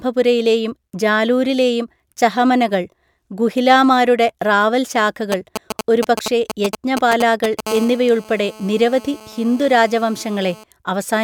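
Right after "ജാലൂരിലെയും ചഹമനകൾ ഗുഹിലാമാരുടെ റാവൽ", from 5.32 s to 7.61 s, a galloping dit-dit-dit of short raspy buzzes cuts across the speech, nearly as loud as the talker. These are GSM signalling bursts: a nearby 2G phone sends brief clusters of radio pulses at about 217 Hz while it signals to the network. Somewhere in the audio circuit those pulses are rectified into audible clicks and buzz fragments.

From 7.67 s to 10.64 s the pattern settles into a continuous hard, raspy drone at 217 Hz, rich in harmonics and about 19 dB below the speech. It runs steadily underneath the talking and has no relation to what is being said. This is GSM phone buzz. A nearby phone is now in an active call, so it transmits its bursts without a break. The audio chain demodulates that regular radio pulsing into a constant buzz.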